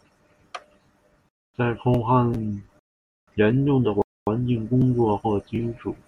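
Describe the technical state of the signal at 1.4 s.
At 1.4 s the speech is interrupted by a gap between chunks, a silent hole running from 1.29 to 1.54 s, about 250 ms long. The audio arrives in blocks of 2 s, and silence is inserted at the join instead of any sound being dropped. It is heard as a short hole in the speech. On a waveform it shows as a flat line cut in sharply, and on a spectrogram as a clean vertical blank band across all frequencies.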